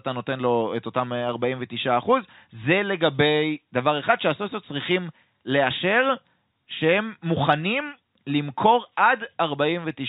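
No faults are audible in this speech, which is carried over G.711 mu-law telephone coding at 64 kbps, so the band stops at 4 kHz and any quantisation noise stays faint under the signal.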